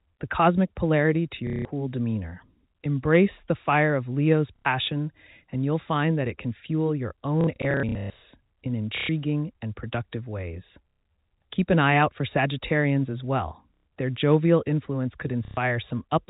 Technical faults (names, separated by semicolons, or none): packet loss with last packet repeated